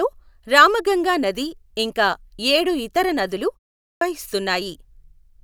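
A clipped start after a pause occurs at 3.83 s, following "ఇంకా ఏడు ఇతర నదులు" and a 0.33 s gap. The output device, idle through the silence, needed about 0.18 s to wake, so the next word bursts in abruptly without its opening sounds.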